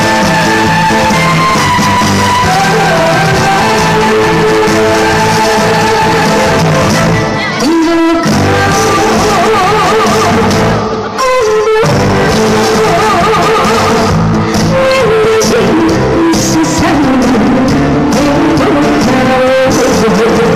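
At 14.89 to 15.01 s there's a short burst of DAB burbling, short noise blips within single sub-bands, where bit errors of around 0.2 percent corrupted several MP2 sub-band frames.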